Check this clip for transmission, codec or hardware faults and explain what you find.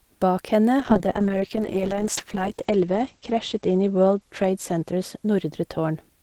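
One transmission fault is present: a call bitrate drop from 0.8 s through to the end of the clip. The encoder's target falls from 64 to 9 kbps, so Opus codes far more coarsely and narrows its bandwidth from 20 kHz to 8 kHz. The speech turns muffled and rough, and it stays at the lowest rate for 2.38 s.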